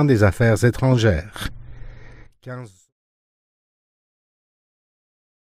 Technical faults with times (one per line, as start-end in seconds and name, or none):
none